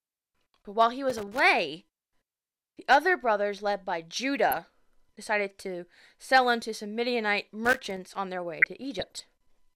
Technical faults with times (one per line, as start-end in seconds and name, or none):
1.10-1.39 loose connector crackle
4.51-4.64 DAB burbling
7.65-7.97 loose connector crackle
8.61-9.22 DAB burbling